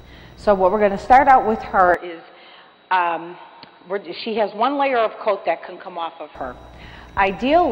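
From 1.94 s to 6.35 s the audio turns dull and boxy, cut off above 4.7 kHz, slightly quieter and with a faint new noise floor, switching without a gap: likely an input switched to a poorer device.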